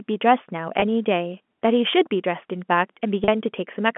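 At 0.80–0.82 s and 3.24–3.28 s, packet loss with pitch repetition: the receiver loops the last pitch period to fill 20 ms and 40 ms gaps, producing brief buzzy holds.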